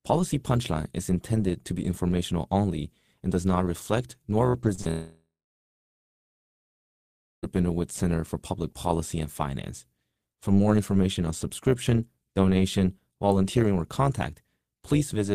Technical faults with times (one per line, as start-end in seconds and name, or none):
0.00-15.34 overlap-add ripple
4.49-4.87 repeated packet loss (robotic sound)
4.91-7.45 long network dropout